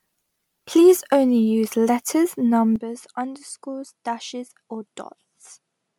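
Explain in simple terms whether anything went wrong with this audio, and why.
Two things went wrong with this speech recording.

The first is generation loss, and it runs through the whole clip. The sound has a swirly, watery texture, consonants and other sharp starts are smeared, and the voice sounds hollow. The high end still reaches almost 20 kHz, so missing treble isn't the problem. The damage is more like a photocopy of a photocopy: the audio was likely compressed and decompressed about seven times, and each round added its own small errors.

The second is an input switched to a poorer device, at 2.76 s, which lasts until the end. From that point the sound turns duller and boxier, because nothing above about 11 kHz gets through. It also becomes clearly quieter, and a faint new background hiss appears under the voice. There is no gap at the changeover. The change is abrupt, which is most likely a switch to a lower-quality microphone or headset in mid-recording.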